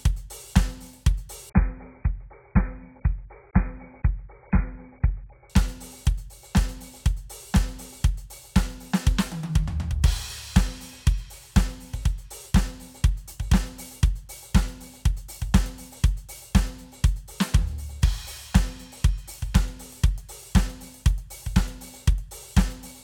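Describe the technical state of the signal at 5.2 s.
At 5.2 s the adaptive stream has switched to a lower bitrate, from 1.5 to 5.5 s, as the connection slowed. Everything above 2.5 kHz is gone, which points to a low-bitrate AAC encode, leaving the music muffled and thick with codec artefacts.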